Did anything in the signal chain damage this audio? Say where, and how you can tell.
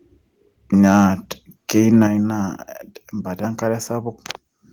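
Yes. Between 0.86 and 1.07 s, and again from 1.77 to 2.04 s, the loudest speech peaks take on a harsh, crackling, flattened edge. This is microphone overload at the converter stage, likely from an input volume set too high. The peaks reach the converter's full-scale limit and their tops are sliced off, by about 2 dB in the first burst and about 1 dB in the second. That affects a couple of percent of samples, then under one percent.

At 2.07 s, right after the second distorted stretch, the speech and the background under it drop together by about 7 dB in a single step, with no fade. That is the microphone volume being stepped down at the call-processing stage, likely by the call software's automatic gain control. Having detected clipping, it cut the device's input volume in one jump. Because the whole signal falls at once rather than just the speech, the change came from the input gain and not from the talker.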